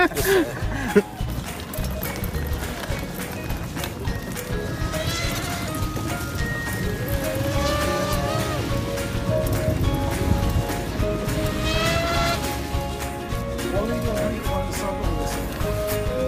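No faults can be heard anywhere in the recording.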